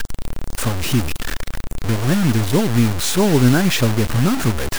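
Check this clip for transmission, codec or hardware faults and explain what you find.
The speech is coarse and grainy from start to finish, with a harsh distortion that rises and falls with the voice instead of sitting underneath it as steady hiss. Quiet syllables and word endings break up into sputtering fragments or drop out entirely. The likely cause is low bit depth without dither: a conversion that truncated the samples to about 4 bits, leaving the error only roughly 10 dB below the speech and tied to the waveform itself.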